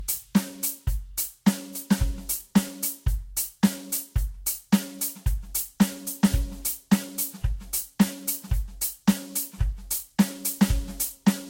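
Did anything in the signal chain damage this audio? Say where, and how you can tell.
Yes, at the codec stage, and throughout the music: it sounds swirly, hollow and smeared, with blurred attacks and nothing above 16.6 kHz. That's likely generation loss from around ten re-encodes, consistent with Vorbis near 64 kbit/s. A single pass at that rate wouldn't sound this degraded.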